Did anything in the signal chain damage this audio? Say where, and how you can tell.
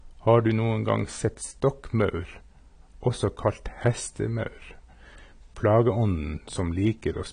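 Yes, the damage happened at the codec stage and runs through the whole speech clip. It is likely AAC compression at a low bitrate, which fits roughly 32 kbps AAC-LC. Nothing is present above 9.6 kHz, so the encoder has pulled its cut-off down to save bits. The remaining bands are coarsely quantised, and that causes the plainly audible dull, smeared tone and the warbling, fizzy texture on sibilants and held sounds.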